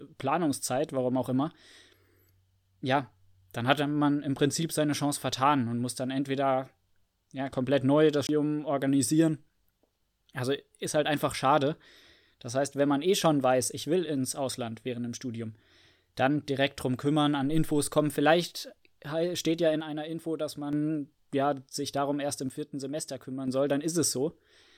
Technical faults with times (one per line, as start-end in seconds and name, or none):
8.27-8.29 CD skip
19.81-20.73 one channel drops out
22.49-23.48 one channel drops out